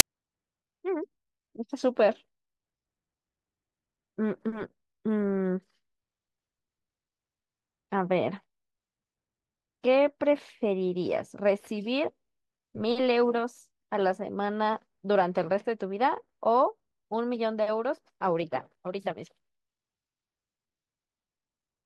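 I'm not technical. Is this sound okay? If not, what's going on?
No. At 0.00 s there's a very brief burst of loud hiss, the fault called file tags played as audio: the cover picture stored inside the file was played as if it were sound. Because it lasts only a few thousandths of a second, it comes across as a single loud snap.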